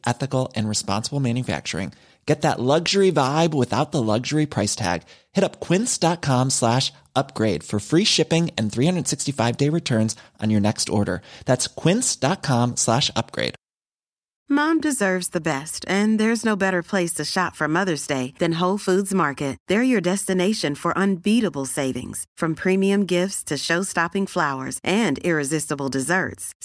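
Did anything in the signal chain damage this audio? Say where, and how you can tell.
No, nothing along the way from capture to playback has left any audible mark on this speech recording.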